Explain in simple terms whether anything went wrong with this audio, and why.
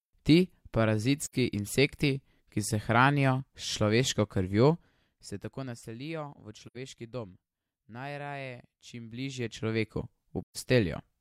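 Three short dropouts come from AAC frame loss with muting, at 1.22 to 1.35 s (just before "insekti ki se hranijo"), 6.67 to 6.77 s and 10.43 to 10.57 s. Bits of the compressed stream went missing, and the player filled each gap with silence. The sound fades out and back in softly, which sets these apart from a hard cutout.

From 8.82 to 10.04 s there is zipper noise. The volume changes by a fair amount in tiny jumps, about 100 per second, instead of gliding. Each jump makes a small tick, so a fine buzzy ticking rides on the speech.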